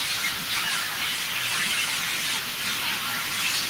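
From start to finish the speech carries an echo with no canceller. At the far end the call is being played on a loudspeaker, that microphone picks it up, and nothing subtracts it before it returns over the network. Each phrase is therefore followed, roughly four tenths of a second later, by a copy sitting about 19 dB below the direct speech, thinner from its trip through a speaker and room.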